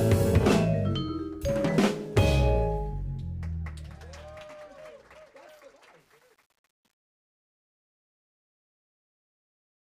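Truncation distortion on a fade runs from 6.00 s to the end at 9.82 s, worst from 6.78 s onward. The sound fades out over roughly the last four seconds, but the level stage that does it keeps too few bits and adds no dither. As the signal shrinks toward the smallest step, the waveform collapses into coarse square steps, so the tail turns gritty. The grain fits a resolution of about 9 bits.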